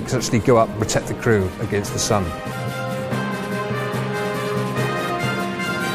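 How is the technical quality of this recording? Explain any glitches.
The recording has two brief glitches, both from damaged data in the compressed stream. At 2.51 s and again at 5.09 s there's a very short blip, over in a fraction of a second. A bit of the encoded data there got corrupted, so the decoder couldn't read those frames properly, lost its place, and had to hunt for the next valid frame header before carrying on. That hiccup in decoding is the blip you hear.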